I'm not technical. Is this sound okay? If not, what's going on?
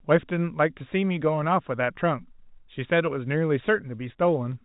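Yes, nothing is wrong: this is ordinary phone-line speech coded as G.711 telephone audio, so it sounds a bit narrow, with nothing above about 3.8 kHz, which is normal for a landline call.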